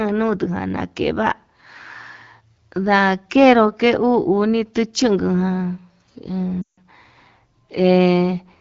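Around 6.61 to 6.80 s a run of lost AMR speech frames leaves about 160 ms missing, enough to fit roughly eight frames. The decoder keeps repeating the last pitch and vocal tract settings at falling gain, so the sound drops to near silence within two frames. It comes back a little weak for a moment, and the AMR-WB wideband codec around it gives only light coding colour.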